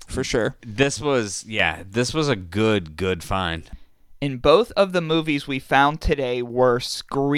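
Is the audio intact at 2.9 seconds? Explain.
Yes, the speech at 2.9 seconds plays through cleanly, with no dropout, glitch or other fault at that moment.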